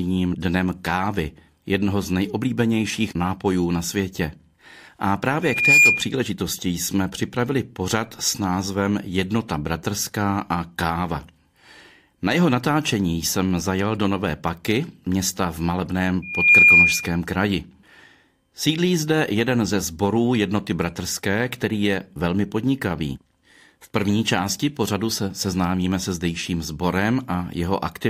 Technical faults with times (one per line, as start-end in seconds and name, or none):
5.42-6.11 loudspeaker feedback squeal
16.22-17.20 loudspeaker feedback squeal